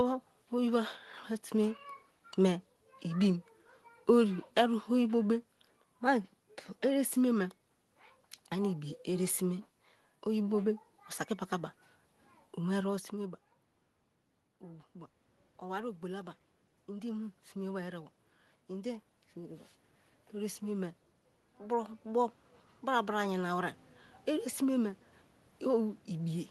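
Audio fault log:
14.61–19.12 s and 20.32–26.50 s, automatic gain rising: the voice fell about 15 dB at the microphone as the talker moved back near 13 s, so the gain control slowly raised its gain, by about 6 dB at first, swelling voice and room noise together.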